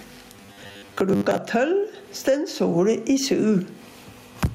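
Gain pumping runs through the whole clip. The gain ducks by around 15 dB under each loud sound, compressing the dynamics. This likely comes from input gain set far too high, with a fast limiter clamping every peak.

From 0.34 s to 1.37 s there is robotic sound from repeated short buffers: a rigid metallic buzz at 100 Hz that loosely tracks the sound. The likely cause is a 10 ms block being replayed while fresh audio is late, with about half the material repeated instead of heard.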